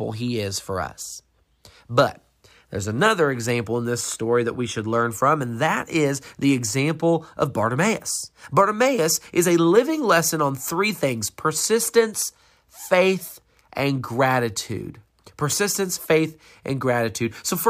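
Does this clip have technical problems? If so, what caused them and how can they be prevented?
No, the speech in this clip shows no technical fault at any point, so there is nothing here to trace to a cause or to prevent.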